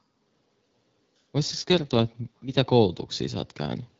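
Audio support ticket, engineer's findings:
AMR rate drop, 1.47 to 2.54 s: speech turns rough, raspy and synthetic, then clears. No gap, bandwidth unchanged. Spectrogram shows smeared harmonics. Waveform stays continuous. The network lowered the AMR-WB rate on a weak link, consistent with 12.65 falling to 6.6 kbit/s.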